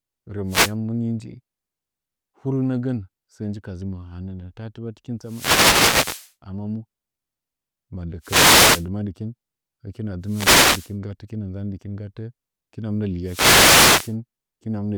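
Five wireless microphone noise hits cut through the speech, at 0.46 to 0.75 s (just before "muni nji"), 5.21 to 6.34 s, 8.21 to 8.88 s, 10.23 to 10.95 s and 13.23 to 14.16 s. Each is the FM radio link fading, so receiver hiss swells into a swish of static. On a spectrogram they show as broadband noise bands.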